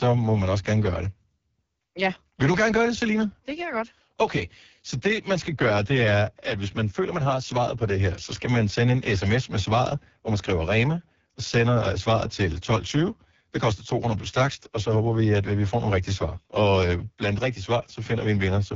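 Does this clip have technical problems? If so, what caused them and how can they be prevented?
Yes. Throughout, the speech passes through the AMR wideband (HD Voice) codec at one of its lowest modes, which fits 6.6 kbit/s, so the vocal tract model is starved of bits and the speech sounds rough and raspy, with nothing above 7.2 kHz. To prevent it, run AMR-WB at 12.65 kbit/s or higher.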